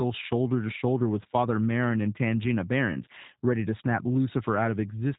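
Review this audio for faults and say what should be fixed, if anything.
Throughout, the speech sounds rough and synthetic with nothing above 3.8 kHz: plainly audible G.729 codec damage, speech rebuilt from a filter-and-pulse model that fits 8 kbit/s. To prevent it, send the audio through a wideband, higher-bitrate codec instead of G.729.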